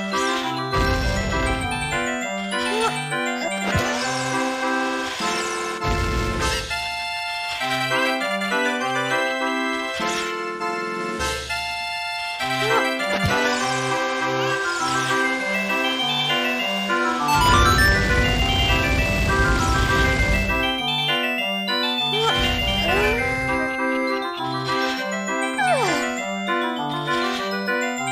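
Nothing in this audio stood out as a technical problem on listening.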